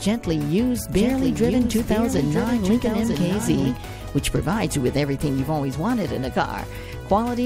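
From 0.95 s to 3.77 s a second copy of the sound runs underneath the original, trailing it by about a second and sitting roughly 5 dB lower. The copy is full-band and dry, with no fade or room colour, and it appears and disappears abruptly at those two points. This is a doubled audio track, likely caused by the signal being captured a second time through a slower path and mixed back in out of step with the first.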